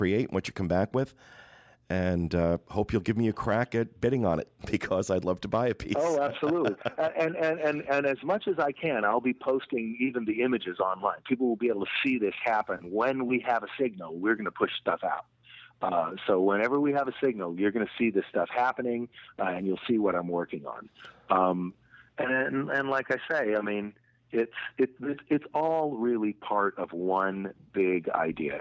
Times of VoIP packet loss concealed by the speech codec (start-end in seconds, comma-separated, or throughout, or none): none